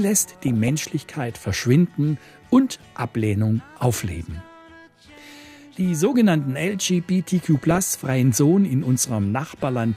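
DAB burbling occurs at 0.48–0.69 s, 2.82–3.03 s, 7.55–7.78 s and 9.49–9.65 s. Bit errors of a few tenths of a percent slip past error correction, so short noise blips appear in individual sub-bands. Unlike a dropout, the programme never stops; burbling blips play over it.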